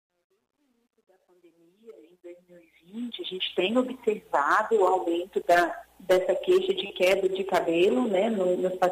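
The sound fades in from the start up to 3.59 s, and that fade carries truncation distortion, worst from 0 to 1.99 s. Undithered requantisation, which fits an 11-bit word length, turns the quiet samples into gritty square steps, seen as staircase waveforms and broadband speckle on a spectrogram.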